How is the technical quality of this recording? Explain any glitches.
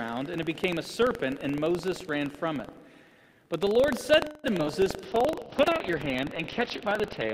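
The recording has a constant playback fault plus a cluster of network-related glitches between 4.25 s and the end, which leave it audibly degraded.

Buffer tearing runs through the whole clip as a robotic rattle at 23.4 Hz, which fits a 2048-sample buffer. In each period the writer and the reader cross, leaving a small slice of audio from about a tenth of a second earlier. Unlike network faults, it never stops while sound is present.

A call audio freeze from 4.25 to 4.46 s holds the last sound as a fading buzz for 186 ms. Delayed packets likely emptied the jitter buffer. Nothing is lost: the audio resumes where it stopped, which separates this from a skip.

Short concealed packet loss at 4.58 to 4.61 s is a brief smear where 20 ms never arrived. The receiver extended the preceding sound for 10 ms and blended back into the real audio. It is much shorter than the freeze and leaves a tiny hole.

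A skip ahead at 4.65 to 4.68 s jumps forward with almost no gap. Roughly 70 ms was discarded, either on the way or by an overflowing jitter buffer. Unlike the freeze, material is missing here and the two sides are joined almost directly.

A jitter buffer slow-down from 4.97 to 5.56 s plays at 86% speed while keeping its pitch. The receiver repeated single pitch periods and pause fragments, adding 87 ms to rebuild its reserve. This draws sounds out rather than pausing them outright.

A call bitrate drop begins at 5.06 s and lasts until the end. The encoder's rate fell from 40 to 7 kbps, and the bandwidth narrowed from 20 kHz to 6 kHz. The result is coarse, watery and muffled, a change in tone rather than in timing.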